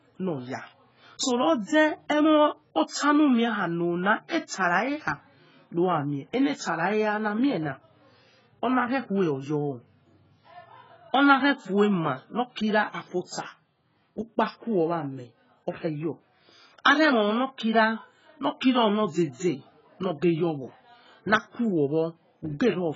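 Across the whole recording the speech sounds dull and smeared, with nothing above about 7.7 kHz, so consonants lose their crispness. Sibilants and held vowels carry a watery, warbling fizz, and the damage is heavy. This is likely AAC compression, its character pointing to AAC-LC at a very low bitrate, around 12 kbps. At that rate the encoder lowers its cut-off and starves or noise-fills many frequency bands to stay within budget.

From 4.28 to 4.31 s a short hiss creeps in just before a sharp attack, and the onset itself sounds softened rather than crisp. This is pre-echo, smeared over about 28 ms. The attack landed late in a transform block, and the encoder spread quantisation noise evenly across the whole block. That noise was sized for the loud attack, so it became audible in the quiet stretch leading up to it.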